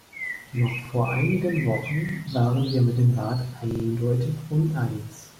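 Short stutters break the speech at 0.85 s, just before "vor einigen", at 2.09 s, before "waren wir mit dem", and at 3.71 s, where one 43 ms slice sounds four times. Each is a repeated buffer: late audio made the device replay its last block, which fits a 2048-sample buffer.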